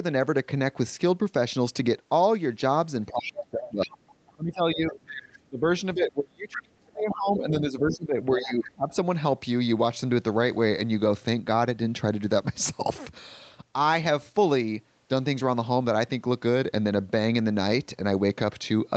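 From 3.11 to 3.99 s, and again from 4.35 to 5.65 s and 5.94 to 8.95 s, the echo canceller likely met double talk: unable to separate the talker from loudspeaker echo, it turned everything down. The result is speech suppressed in double talk, dipping by roughly 25 dB, and by about 35 dB in the longest stretch. Over the same span, the other side's voice leaks through, likely because echo cancellation left residual loudspeaker sound in the microphone. It surfaces as brief scraps at 3.23 to 3.46 s, 4.28 to 4.34 s, 7.09 to 7.14 s and 8.39 to 8.52 s. The loudest scraps sit only about 10 dB below the talker, and the quietest about 35 dB below.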